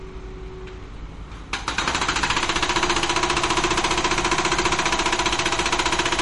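From start to end, nothing sounds above 11.2 kHz. Quiet detail swirls and turns watery. The damage is plainly audible. The likely cause is MP3 compression at a low bitrate, about 48 kbps. The encoder cut the treble and dropped weak frequency lines frame by frame.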